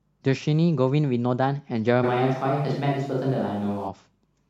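From 2.05 s to 3.87 s the speech jumps abruptly into a hollow, roomy sound with thinner bass, then snaps back just as suddenly. This is a switch to a distant microphone, likely because the close microphone's signal dropped out and a farther pickup filled in. The loudness barely changes, and background noise sits roughly 35 dB below the speech. The hard cuts at both ends set it apart from added reverberation or a gradual loss of bass.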